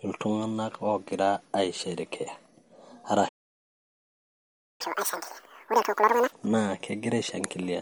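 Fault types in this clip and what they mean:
MP3 compression: The whole clip has a dull, watery quality and a swirly shimmer on the s sounds and consonant edges. That's likely an MP3 encode that ran short of bits. The encoder chopped off the treble at a fixed point and dropped weak frequency detail that then flickers in and out from frame to frame. The damage is plainly audible and fits a low bitrate, something around 48 kbps.
Playback stall: At 3.28 s the sound just stops mid-flow and stays silent until 4.81 s, a gap of about 1.5 s. It doesn't sound like a natural pause. The audio breaks off abruptly and picks up again later. The likely cause is the player running dry on data, or its thread getting blocked, so the output sat idle until it recovered and could start feeding samples again.
Catch-up at higher speed: Right after the gap, from 4.81 s to 6.32 s, the speech rushes along at double speed, with the pitch pushed up by roughly ten semitones, so it sounds chipmunk-like. 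That's the player resampling its backlog to win back the time lost in the stall. Speed and pitch rise together because it's simple resampling, and both drop back to normal once the backlog is cleared.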